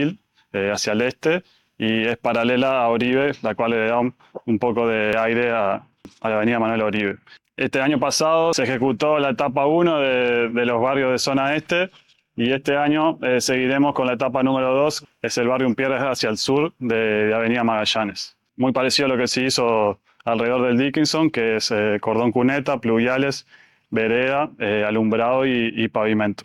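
No technical faults are audible.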